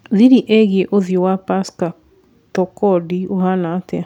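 Speech recording, no technical faults audible anywhere in the clip.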